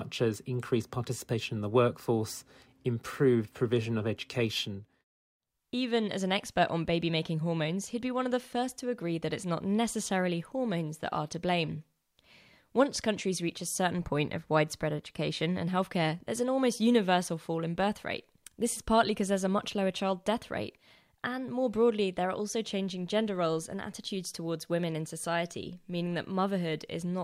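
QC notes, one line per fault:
No faults to note.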